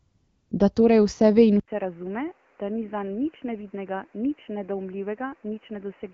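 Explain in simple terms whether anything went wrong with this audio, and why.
Two things went wrong. From the start to 0.51 s there is AMR comfort noise: the phone treated that opening as silence and sent no speech, so the receiver filled it with a smooth, artificial hiss in place of the real background.

At 1.6 s, right after "ve in", the audio likely switched its input to a poorer device. After a brief gap of 80 ms, the sound turns dull, with nothing above 3 kHz. It also drops in volume and picks up a new background hiss, and stays that way to the end.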